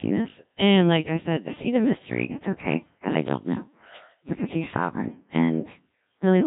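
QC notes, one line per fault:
Throughout, Codec 2 vocoder: the speech comes out robotic and buzzy because the decoder rebuilds it from sine waves using only pitch, voicing, energy and a rough spectral shape. The heavy damage fits Codec 2's 1.3 kbit/s mode.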